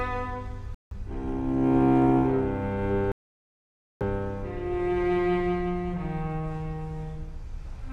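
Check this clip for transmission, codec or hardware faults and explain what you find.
The audio drops out to silence twice, at 0.75 to 0.92 s for about 167 ms and at 3.12 to 4.03 s for about 890 ms, then resumes. This is likely a Bluetooth stall: interference delayed packets, the headphones' buffer emptied, and playback halted until retransmitted data arrived.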